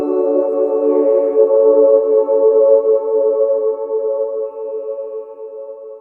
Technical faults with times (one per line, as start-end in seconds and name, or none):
none